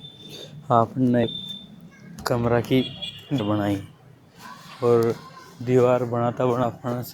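A speech recording with dropouts where compressed frames were skipped, at 1.23–1.26 s, 2.19–2.25 s (just before "कमरा की"), 3.39 s (just after "कमरा की") and 6.63 s. At each point the speech leaps forward, losing about 300 ms at three of them and about 200 ms at 2.19 s. Those amounts are consistent with around ten to fifteen 20 ms codec frames going unplayed. On a waveform the envelope changes abruptly without a gap, and a spectrogram shows a discontinuity in the harmonics and formant tracks. At 1.49 s a sharp snap rides on top of the speech, most likely an electrical switching spike from a nearby switch, motor or static discharge arcing onto the line. It shows as a narrow spike on the waveform and a thin vertical broadband stripe on the spectrogram.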